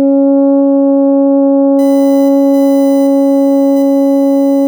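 USB whine enters at 1.79 s and continues to the end of the music. A fixed-pitch tone sits behind the mix, built on 1 kHz with its strongest component at the 2 kHz harmonic, around 25 dB below the music. It comes from the USB bus drawing current in regular 1 ms frames; that periodic load leaks into the audio through a shared power or ground path, so the frame rate and its multiples become audible as a steady whine.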